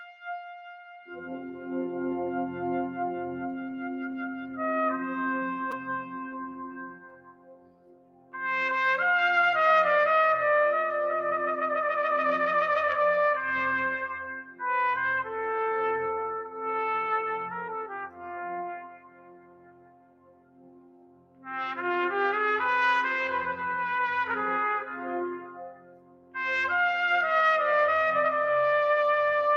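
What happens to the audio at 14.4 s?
At 14.4 s the sound sinks, falling by about 15 dB at its deepest and leaving a sunken patch from 14.31 to 14.62 s. This is sound cut by the noise suppressor. The suppressor judged this stretch to be noise and turned it down harder than its surroundings, so for about 0.3 s the sustained and fading parts drop away instead of carrying through, and the level only recovers once the span ends.

That dip sits within a wider fault that runs through the whole clip: a noise suppressor applied to music or sounds. The sound pumps, flutters or thins out, with swings on the order of 20 dB, because a processor built for speech keeps treating steady tones, ambience and decaying tails as background noise to be removed. The moment at 14.4 s is simply where that misjudgement bites harder than around it.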